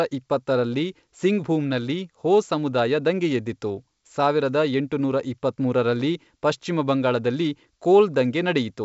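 This is a speech clip, and nothing is technically wrong with it.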